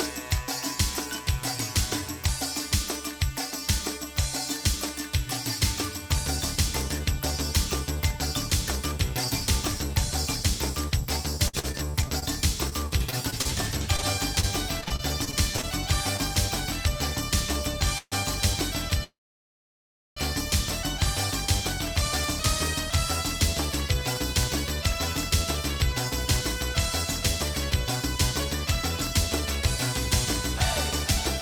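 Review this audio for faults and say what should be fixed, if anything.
From 11.47 to 16.20 s there's repeated packet loss, heard as choppy, robotic sound: around two dozen short holes, the longest about 58 ms, each patched by stretching the last sound, so roughly 11% of that stretch is filler. Stronger loss recovery, such as FEC or redundancy, would help.

At 17.98 s the audio stalls for about 0.14 s and briefly drops to silence. At 19.04 s it halts for about 1.1 s, mostly silent, before resuming at 20.18 s with nothing lost. This is likely a call audio freeze from delayed packets draining the jitter buffer. An adaptive buffer with more headroom would prevent it.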